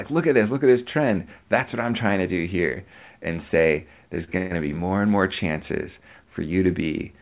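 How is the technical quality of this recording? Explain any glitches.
The recording has two brief timing glitches close together. The sound is also band-limited, with nothing above 4 kHz, which fits a narrowband call codec such as G.711.

From 4.24 to 4.30 s there is a short stall from a late packet. A packet arrived late and the jitter buffer ran dry. The receiver held the last sound for about 36 ms, so it drags slightly, then resumes without losing anything.

From 4.38 to 4.53 s there is a call audio freeze. The sound hangs for about 130 ms as a fading buzz, never dropping to silence. It then picks up where it stopped. The likely cause is packets held up in transit emptying the jitter buffer.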